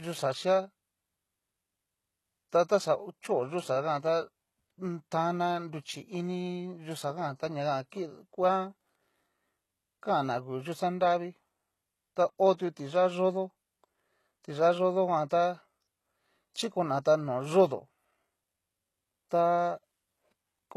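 It's a speech clip with plainly audible codec damage throughout: gritty, metallic sibilants and nothing above 12.3 kHz, likely HE-AAC compression at a very low bitrate, around 16 kbps, rebuilding the treble from copied lower bands.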